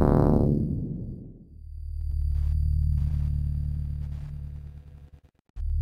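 From 2.01 s to the end, a faint, steady ticking runs beneath the sound at nearly ten clicks a second, roughly 40 dB below the main audio. This is Wi-Fi interference: a nearby radio's beacon, repeating every 102.4 ms, is being rectified by the audio circuit.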